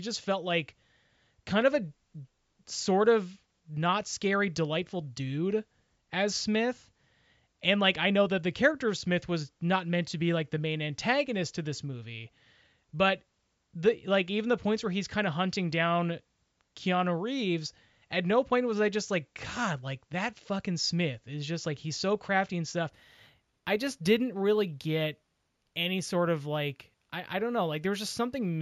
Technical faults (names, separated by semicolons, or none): imaging from linear upsampling